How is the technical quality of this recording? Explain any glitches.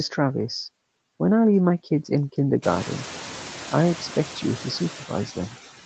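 The clip's one glitch is noise suppressor artifacts, which run through the whole clip. They stand out more once the room's background noise rises by about 18 dB at roughly 2.5 s, settling about 17 dB below the speech.

Noise suppressor artifacts, throughout: the suppressor lowers each band it judges to be steady noise by about 9 dB, frame by frame. The leftover background therefore dips between phrases and swells under speech.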